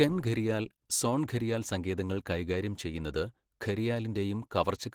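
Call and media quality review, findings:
Opus compression, throughout: speech muffled, hoarse and grainy, plainly audible. Likely low-rate Opus in hybrid speech mode, near 16 kbps, starving bands and noise-filling.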